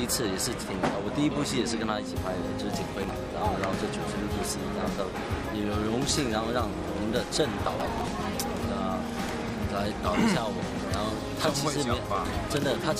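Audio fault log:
2.97–3.09 s: processor overload crackle. A short gritty tear where the processor falls behind and a run of small buffers, probably around 10 ms each, miss their deadlines. Nothing fills those slots, so the sound skips in tiny hard-edged gaps, and the clicks blur into crackle.
7.66–8.09 s: processor overload crackle again, longer this time, close to half a second of missed deadlines. It's the same skip-and-click texture, and it clears once the load drops.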